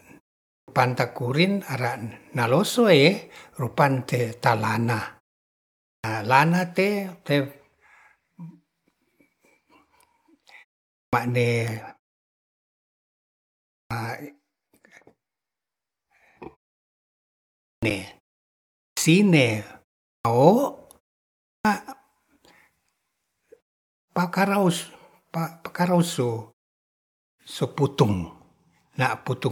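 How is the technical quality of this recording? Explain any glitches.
The recording has a clipped start after a pause, at 0.52, 5.9, 10.99, 13.77, 17.68, 18.83, 20.09 and 21.5 s. The output device sleeps during silence and needs about 140 to 160 ms to wake, so each word onset is swallowed.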